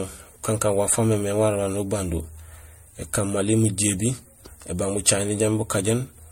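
The speech has most likely been through repeated MP3 encoding, decoded and re-encoded around four times at 64 kbit/s. This generation loss runs from start to finish. Each pass quantised the signal again on a shifted frame grid, so noise and spectral gaps accumulated rather than staying fixed. The result is swirly, smeared and hollow, more degraded than 64 kbit/s alone would give, with blurred consonant attacks and nothing above 16.5 kHz.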